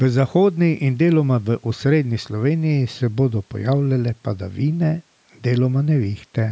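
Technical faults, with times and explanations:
Nothing's wrong with this speech; it's simply come through a call's microphone processing, so the lowest bass is trimmed away and there's nothing above 8 kHz, which is just how that path normally sounds.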